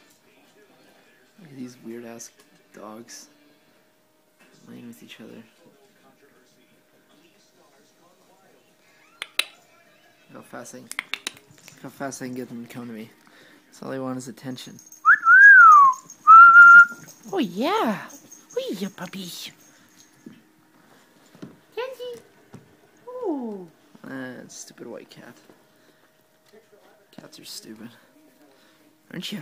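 Nothing goes wrong anywhere in this one; there's just no technical fault to point to.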